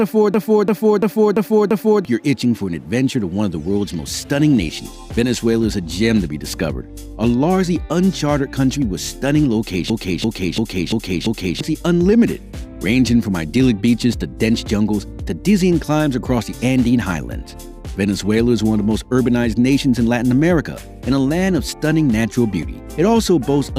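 At 0.34 s and again at 9.90 s, each lasting about 1.7 s, a system hang loop replays one 341 ms slice of audio exactly, five times, at about 2.9 repeats per second. This gives a slow machine-gun stutter, which fits a 16384-sample ring buffer cycling while the system froze, and roughly a second and a half of sound is lost each time. Unlike a dropout or a glitchy underrun, there's no silence and no varying fragments, just identical copies.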